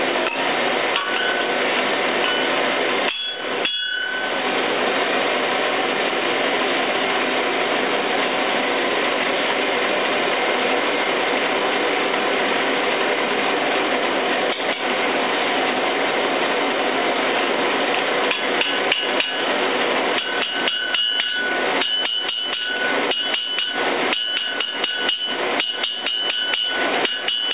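No faults can be heard anywhere in this audio.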